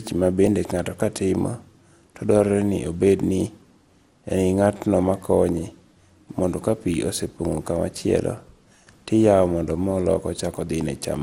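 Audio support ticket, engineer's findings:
Generation loss, throughout the full clip. Speech swirly, smeared and hollow, consonant onsets blurred, nothing above 16.5 kHz. Likely cause: repeated lossy re-encoding, about five passes, character fitting an MP2 chain near 96 kbit/s. Each pass requantises on a shifted frame grid, so noise and spectral holes accumulate.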